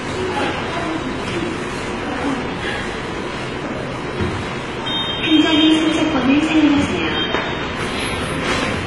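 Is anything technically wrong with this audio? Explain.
Yes. Throughout the whole clip, the audio shows two layers of lossy coding artefacts together, which points to transcoding between lossy codecs. The likely chain is a very low-rate HE-AAC encode, around 20 kbit/s, re-encoded as AAC-LC at around 32 kbit/s. The second encoder spent bits reproducing the first one's smeared, swirly texture while adding its own coarse quantisation. On a spectrogram, the energy stops flat at 11.4 kHz, with patchy, blocky detail below it. The waveform looks normal.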